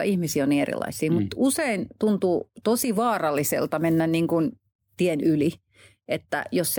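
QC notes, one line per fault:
No faults to note.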